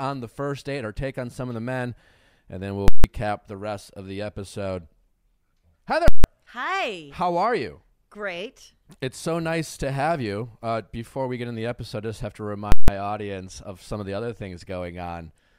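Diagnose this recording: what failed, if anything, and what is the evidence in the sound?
A processing calculation produced invalid numbers at full scale, pinning the output for 160 ms at 2.88 s (after "then we'll"), 6.08 s and 12.72 s (after "I just have to"), heard as loud pops around a dead gap.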